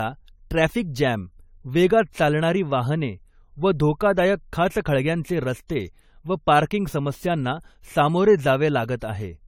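From start to finish the speech has a swirling, smeared and hollow quality, with consonant onsets blurred and soft, and content stops near 19.9 kHz. This is generation loss, likely from the audio being run through a lossy codec about three times, which fits repeated AAC-LC encoding at 64 kbit/s. Each re-encode quantises the signal on a fresh frame grid, so the noise and spectral holes from every pass pile up.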